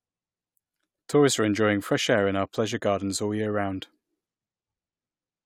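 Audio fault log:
Nothing stood out on listening to this speech clip.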